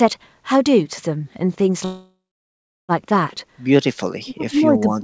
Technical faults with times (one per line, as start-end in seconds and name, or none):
1.85-2.92 call audio freeze
4.20-5.04 speech suppressed in double talk